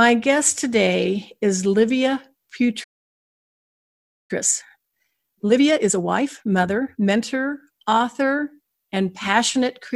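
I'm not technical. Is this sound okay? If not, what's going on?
No. A playback stall hits from 2.83 to 4.31 s: the speech cuts out mid-flow and there is silence for about one and a half seconds. The likely cause is that the player ran short of incoming audio, or got held up, and had nothing to play until it recovered.

Time-compressed catch-up follows from 4.31 to 7.21 s. To make up the lost ground, the player trims away tiny slices and blends the joins, so the speech runs about 1.5 times faster at normal pitch.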